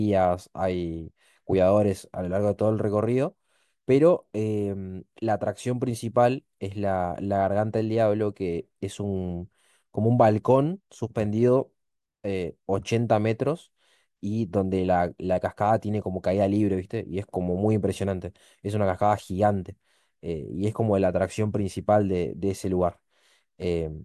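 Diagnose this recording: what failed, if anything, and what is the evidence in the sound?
Nothing failed; no faults heard.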